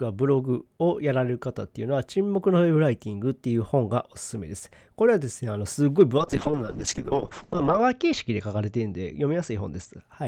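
A call bitrate drop runs from 6.18 to 10.07 s. Starved of bits, the encoder codes the speech coarsely and narrows its bandwidth from 20 kHz to 8 kHz, so it sounds muffled and rough. The worst 1.6 s fits a fall from about 32 to 7 kbps.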